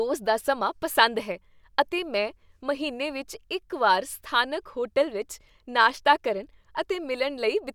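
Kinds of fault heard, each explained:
No kinds of fault are heard in this speech recording.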